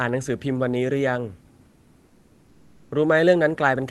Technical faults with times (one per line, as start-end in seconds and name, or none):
1.65-2.89 comfort noise in place of the background